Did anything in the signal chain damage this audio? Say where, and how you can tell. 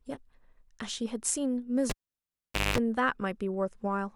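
Yes. The analogue wiring was disturbed by a cable pulled and plugged in between 1.90 and 2.78 s. A pop opens the gap, and the speech falls to near silence for about 0.83 s. A burst of 50 Hz mains buzz lasting about 0.21 s follows as the plug's tip makes contact before the connector seats fully, then a second pop brings the sound back. A digital dropout would leave clean silence, with no hum and no pops at either end.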